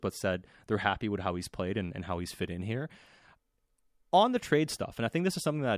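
No technical faults are audible.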